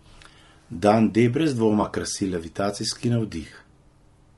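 Throughout the speech, the sound is rough and grainy, with a hiss filling the gaps between voice harmonics and a thin, synthetic-sounding top band. The likely cause is low-delay AAC compression (AAC-ELD); short frames resolve pitch poorly, and the damage fits a bitrate around 32 kbps.

At 1.81 s, just before "krasi levitacijski", a brief smeared, noisy patch lasts about 30 ms. At 3.47 s, right after "krasi levitacijski", a longer phasey smear runs about 60 ms. Both are AAC frame loss with concealment: the decoder rebuilt missing frames from the last good spectrum. The first fits one lost frame, the second two.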